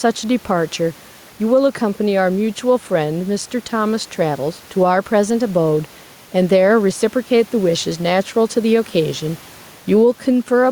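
Gain pumping runs through the whole recording, with the level swinging by about 5 dB; the room noise sits about 32 dB below the speech. The likely cause is microphone gain set far too high, with a fast limiter repeatedly pulling it down, leaving the speech squashed and flat in dynamics.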